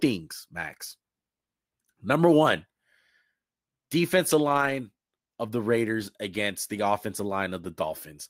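Speech, with a lost packet rebuilt from error correction: between 4.49 and 4.71 s six separate packets went missing, and the decoder filled the hole with the lower-bitrate backup copies that the following packets carried. About 120 ms was rebuilt this way, which fits six 20 ms packets. The sound never drops out, but that stretch turns rougher and noisier than the audio on either side.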